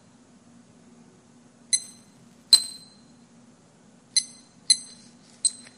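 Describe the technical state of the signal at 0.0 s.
At 0.0 s the signal is intact, with no audible dropout, clipping, distortion or other fault at that moment.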